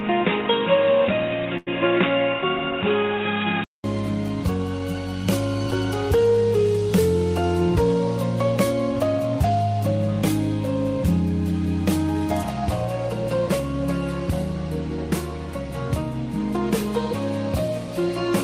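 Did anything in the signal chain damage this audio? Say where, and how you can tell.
Yes. From 0.0 to 3.84 s nothing passes above 3.8 kHz, a steady noise floor sits well below the signal, and a 200 ms gap marks the change. This is likely an input switched to a poorer device at capture.

At 1.57 to 1.69 s, a short stall from a late packet holds the sound for 92 ms. The jitter buffer ran dry and stretched the last audio, then resumed with nothing lost.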